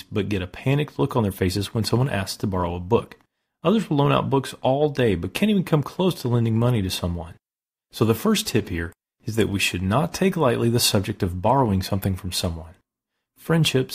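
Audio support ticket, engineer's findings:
No faults found in this speech recording.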